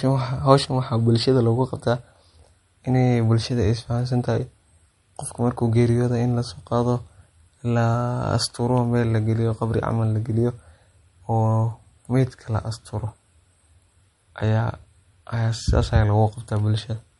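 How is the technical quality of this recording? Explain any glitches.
The recording is speech carrying plainly audible, low-bitrate lossy coding damage throughout.

MP3 compression, most likely at a low bitrate around 48 kbps given the damage heard, affects the whole clip. The encoder divides the signal into narrow frequency lines and, short of bits, discards the top band entirely and drops quieter lines frame by frame. Here nothing remains above 11.2 kHz, so the speech sounds dulled at the top. The flickering lines give a watery, swirly texture, with chirpy sibilants and smeared consonant onsets.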